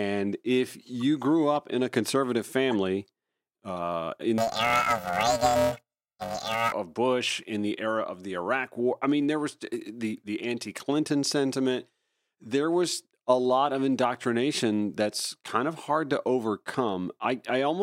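From 4.38 to 6.72 s, after "conservative family uh in", planar audio read as interleaved gives a robotic buzz at about 345 Hz, with no octave jump as long blocks would give.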